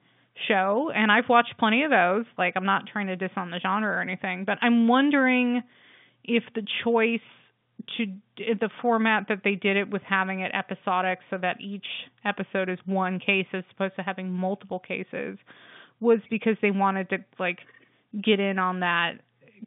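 Nothing stood out as a fault on listening to this speech recording, which carries the narrow, telephone-line sound of G.711 coding.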